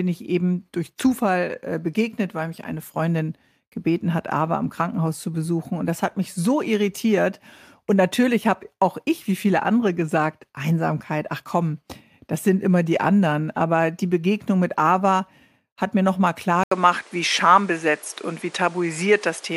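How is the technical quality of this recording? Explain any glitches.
One clear glitch near the end: from 16.63 s, right after "hat mir nochmal klar", the speech loses its top end and stays that way to the close. A brief 80 ms gap marks the change, after which nothing lands above 11.2 kHz and a new noise floor sits roughly 30 dB under the voice, with loudness unchanged. This points to the input switched to a poorer device, likely a different microphone. A spectrogram shows a hard ceiling at 11.2 kHz, and the waveform shows a short flat gap at the switch.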